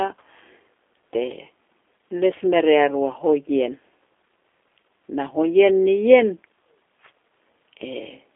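From start to end, the speech carries G.729 codec damage, and it is plainly audible. The band is narrow, roughly 300 Hz to 3.5 kHz, with nothing above 3.7 kHz. The coder rebuilds each 10 ms frame from a vocal tract filter, a pitch predictor and a few pulses. That leaves the voice rough and slightly synthetic. The quality fits an 8 kbit/s G.729A stream.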